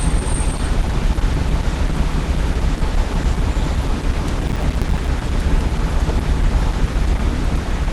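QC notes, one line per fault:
Throughout: Opus compression, likely at a low rate in the codec's hybrid mode. The sound is muffled and hoarse, and nothing reaches above about 12.1 kHz. Rather than the swirling holes of MP3, the damage is a rough, grainy noisiness.
4.48 to 5.08 s: processor overload crackle. Many short buffers, around 5 ms each, were dropped over a short stretch and replaced by silence, which fits roughly twenty missed deadlines. The hard-edged gaps form a gritty tearing over the sound that stops once the load clears, unlike a single isolated click.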